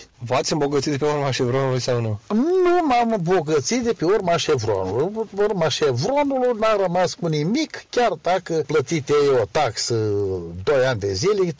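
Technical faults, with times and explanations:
2.5–11.6 s, resampler restarted on every block: a fine 20 Hz buzz runs under the sound. It comes from a small error at each 50 ms block edge, where the converter was reset and lost the neighbouring samples. The change in bandwidth fits a conversion from about 44.1 kHz down to 16 kHz. Unlike mains hum, the buzz follows the signal and stops with it. Unlike dropouts, no audio goes missing; each edge is only slightly distorted.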